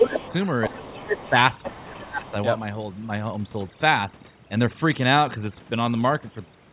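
Overdone noise removal runs throughout, leaving a near-silent background with twinkling specks. On a spectrogram these show as scattered isolated dots between blanked-out gaps. Everything sits below 4 kHz with an empty band above, consistent with a narrowband telephone codec.

From 0.00 to 0.34 s the other side's voice leaks through, about 5 dB louder than the talker, likely residual loudspeaker echo. Meanwhile, from 0.00 to 0.26 s, the talker's speech is likely suppressed in double talk, dipping by about 10 dB. The waveform shows a clear notch in the talker's envelope.

From 0.62 to 2.04 s the other side leaks again, roughly 10 dB below the speech, as faint overlapping harmonics. Likely double-talk suppression pulls the talker down from 0.68 to 1.35 s, by about 15 dB, and from 1.69 to 2.34 s, by about 20 dB. Both show as sagging stretches in the waveform and spectrogram. A last faint scrap of leakage, about 25 dB down, appears at 2.27 to 2.31 s.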